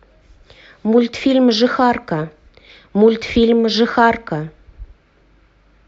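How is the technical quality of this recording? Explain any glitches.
No technical glitches can be heard in this recording.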